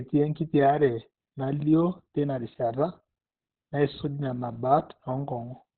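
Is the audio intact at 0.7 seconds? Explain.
No. At 0.7 seconds you're hearing the same damage that runs through the whole clip, which is likely Opus compression. The encoder seems to have dropped into its SILK speech mode at narrowband, so everything above about 4.3 kHz is simply gone. The speech comes across muffled and hoarse, with heavy coding damage. That's the sound of a very low bitrate, something around 12 kbps.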